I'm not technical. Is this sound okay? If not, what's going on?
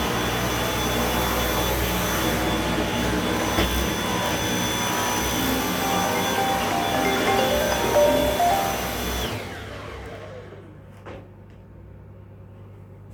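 Yes, I listened closely and nothing in this sound stood out as a problem.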